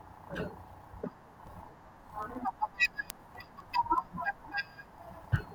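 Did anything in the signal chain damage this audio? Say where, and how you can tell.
Yes, word clock ticks from a clocking fault on the digital link into the converter. From 0.22 s to 5.49 s, sharp ticks of uneven strength sit over the speech at a steady rate of roughly one every 0.15 s, around forty in all. The receiving device runs on its own clock rather than locking to the sender's. Each time the two clocks slip by one sample, that sample is dropped or repeated, producing a tick. The rate points to a clock mismatch on the order of 150 ppm.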